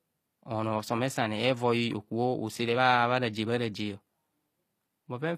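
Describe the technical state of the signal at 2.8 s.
At 2.8 s the treble of the speech sounds gritty and metallic, with sibilants lispy and nothing above 14.9 kHz, as throughout the clip. This is likely HE-AAC compression, rebuilding the upper band by copying lower harmonics upward, consistent with roughly 24 kbps.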